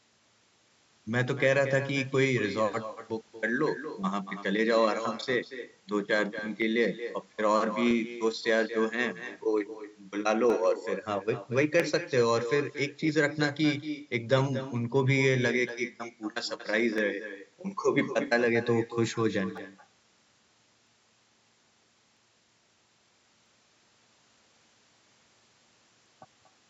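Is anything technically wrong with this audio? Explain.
Yes, there are two faults in this speech.

Throughout the clip, every phrase is trailed by a fainter, thinner copy about 11 dB quieter, arriving around a fifth of a second later. This is echo with no canceller: the far end's loudspeaker fed its microphone, and nothing removed the returning signal.

From 0.13 s to 26.06 s, a click or pop recurs steadily every 1.3 s, about twenty times in all. These are likely clock drift buffer slips: two devices' clocks disagree by a few hundred parts per million, so the buffer periodically drops or repeats a short block of samples.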